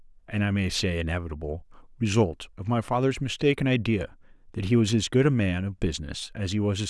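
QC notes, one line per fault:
No faults heard anywhere in the speech recording.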